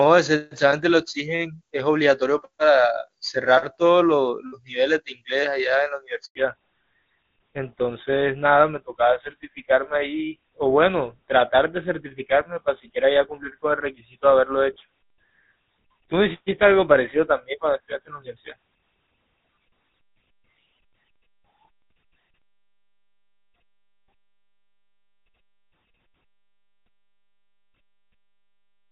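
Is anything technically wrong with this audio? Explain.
Yes. At 6.25 s the speech cuts to silence for 100 ms, resuming at 6.35 s. This is a handover gap: while the call switched from one network to another, no speech frames arrived, so whatever was said in that moment is simply missing.

From 6.35 s to the end, the speech sounds duller and rougher, with nothing above 4 kHz. This is a fallback to narrowband. Before the switch, the HD Voice wideband codec carried clear, full-bodied speech. Afterwards the call ran on an older narrowband codec, which fits GSM full rate, and that codec discards the upper band.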